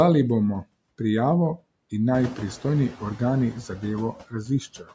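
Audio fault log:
Throughout, noise suppressor artifacts: steady background is cut by about 22 dB band by band, frame by frame, so residual noise sinks between words and rises beneath them.
2.14–2.51 s, noise suppressor catching up: room noise jumps about 12 dB; the lagging estimate removes only about 5 dB until it adapts after 370 ms.
4.13–4.93 s, speech cut by the noise suppressor: quieter speech is mistaken for noise and lowered by up to about 16 dB, about a third of a second in total, sounding swallowed.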